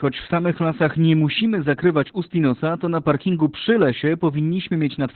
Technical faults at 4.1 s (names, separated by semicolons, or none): Opus voice compression